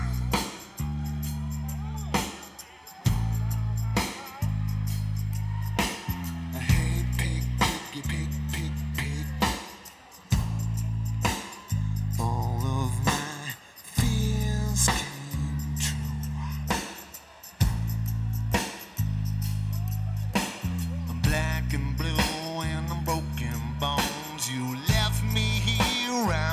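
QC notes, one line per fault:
No faults heard anywhere in the clip.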